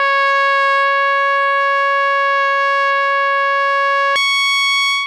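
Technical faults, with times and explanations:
4.16 to 5.07 s, wrong sample rate: the music runs twice as fast and a full octave higher, which fits 22 kHz material played at 44.1 kHz. Unlike a pitch shift, tempo and pitch jump together.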